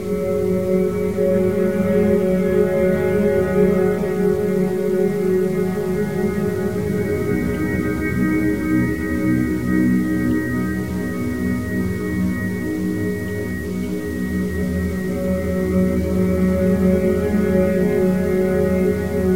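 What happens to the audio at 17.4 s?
At 17.4 s the sound is grainy and gritty, with distortion that tracks the signal, as it is throughout the clip. The likely cause is low bit depth without dither, truncated to 6 bits, leaving error only about 25 dB below the signal.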